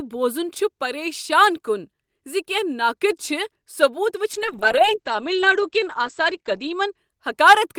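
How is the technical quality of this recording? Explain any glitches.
The recording has one clear glitch: a call bitrate drop in the second half of the speech.

From 4.39 s to 7.03 s, the call's bandwidth estimate fell and the encoder was pushed to a much lower rate, consistent with a drop from around 40 kbps to about 10 kbps, held at the bottom for about 2.4 s. With so few bits, the codec quantises coarsely and narrows the audio band from 20 kHz to 8 kHz, so the speech turns muffled and rough, losing its crisp high end until the rate recovers.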